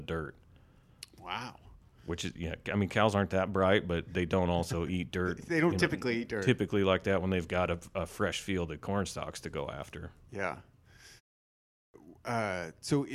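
Speech, with a clipped start after a pause: during a 0.39 s gap the output device drops into a low-power state and needs time to wake and relock, so about 430 ms of sound from 11.51 to 11.94 s is lost and speech resumes abruptly, missing its first sounds.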